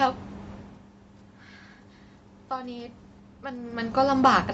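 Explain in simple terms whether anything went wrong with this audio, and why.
From about 2.49 s to the end of the clip at 4.53 s, the speech and the background noise swell up together, slowly and steadily. That is automatic gain rising: the sound reaching the microphone had become much quieter, so the call's level control gradually turned itself up to make up for it.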